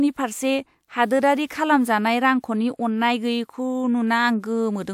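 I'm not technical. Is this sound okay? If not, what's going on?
No. At 1.47 s there is pre-echo. A short hiss appears about 31 milliseconds before a sharp sound in the speech, lasting until 1.50 s. The compression spread its noise over a short stretch, so it leaks ahead and blurs that attack.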